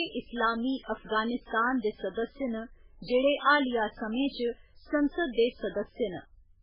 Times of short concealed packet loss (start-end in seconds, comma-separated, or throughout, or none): none